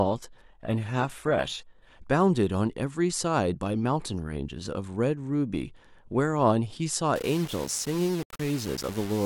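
From 0 to 2.0 s, adaptive stream starting at a low bitrate: the treble sounds synthetic, as from a 16 kbit/s HE-AAC version, until a sudden gapless step up, likely near 96 kbit/s; a spectrogram shows the upper band filling in abruptly. From 7.16 s to the end, gritty distortion tracks the speech, likely low bit depth without dither, fitting about 5 bits, rounded. The waveform looks stair-stepped, with noise about 15 dB below the signal.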